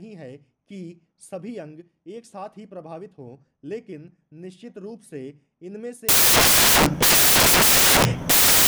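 From 6.09 s to the end of the clip, the sound gives way to loud, harsh broadband noise. These are samples built from the wrong bytes: the reader assembles each sample with its bytes misaligned or swapped, so the rapidly fluctuating low-order bits land in the most significant position and dominate every value, burying the original signal under broadband hiss.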